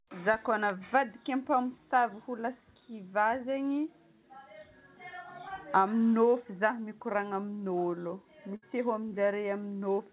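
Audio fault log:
Audio fault log:
5.48–5.52 s, short concealed packet loss: about 20 ms never arrived in time, so the receiver patched the hole by continuing the preceding sound and blending back in. Unlike a burst, the patch is too brief to fade and leaves a quick smear or wobble.
8.56–8.64 s, burst of packet loss: about 60 ms went missing in a row. The receiver stretched the last sound across the gap while turning it down, so it decays into a held buzz or hiss. Unlike the shorter dropout, the sound fades, and the audio resumes with that stretch skipped, all within the 4 kHz ceiling of the G.711 call path.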